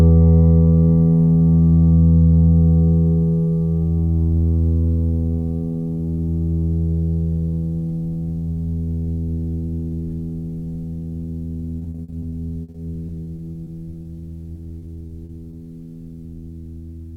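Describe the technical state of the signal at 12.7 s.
At 12.7 s you're right in the middle of a run of repeated packet loss (robotic sound) lasting from about 11.79 to 14.07 s. The music keeps getting holes punched in it, each no longer than 60 ms, and the receiver patches them by stretching out whatever came just before. About 440 ms gets papered over that way, roughly a fifth of the stretch, while about 320 ms is simply gone. So it sounds choppy, with chunks missing.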